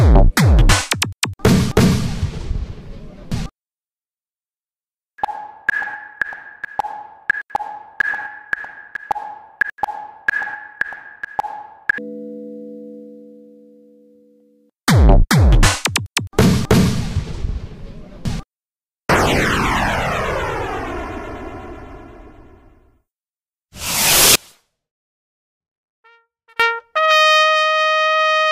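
A recording of sounds with an audio dropout to a faint residue from 24.35 to 26.60 s. For about 2.24 s the signal cuts out abruptly, leaving only a faint leak roughly 35 dB below normal level. The likely cause is a brief signal loss upstream while the downstream path stayed live.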